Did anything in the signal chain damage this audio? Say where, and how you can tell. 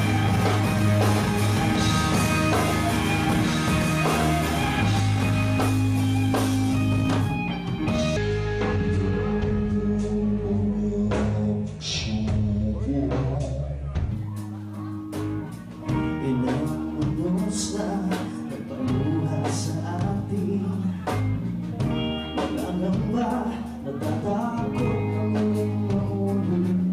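Yes. From the start to 5.0 s there's a doubled audio track: a full-band copy about 5 dB down trails by roughly a second and a half, dry, and cuts off abruptly. Most likely an edit or a second capture path in storage left two copies out of step.

From 8.17 to 14.11 s you get a section at the wrong speed: it plays at 0.668x, so everything drops about seven semitones and drags. Pitch and tempo shift together right at the boundaries, likely playback or an edit running on the wrong clock.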